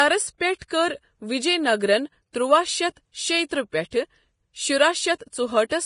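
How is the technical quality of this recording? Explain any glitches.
The recording is technically poor, with heavy, grainy compression damage throughout and two short pre-echo smears near the start.

Vorbis compression, throughout: nothing is heard above 10.6 kHz, and the remaining treble hisses and roughens the speech. The likely cause is heavy lossy coding, where coarse quantisation turns fine treble detail into noise, which fits a low bitrate.

Pre-echo, 0.56 to 0.61 s and 0.68 to 0.71 s: short hiss runs about 49 ms and 27 ms ahead of attacks, blurring them, because block-wide quantisation noise spills into the quiet moment just before each onset.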